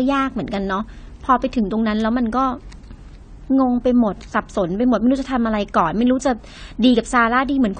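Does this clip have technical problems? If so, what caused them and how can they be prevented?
Yes. Likely AAC compression at a low bitrate, near 32 kbps, strips content above 9 kHz throughout, leaving the speech dull, smeared and fizzy on sibilants. Encode at a higher bitrate or keep a lossless copy.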